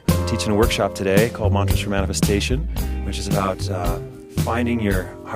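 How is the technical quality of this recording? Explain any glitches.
The recording has one clear fault. From 2.57 s to the end, channel delay (comb filtering) sets in: one channel arrives around 20 ms late and the two are summed to mono, cancelling shared content at evenly spaced frequencies from around 30 Hz upward. The sound turns rough or slightly doubled.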